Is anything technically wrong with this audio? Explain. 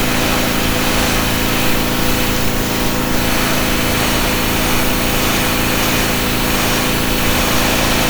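No, nothing is technically wrong with this audio.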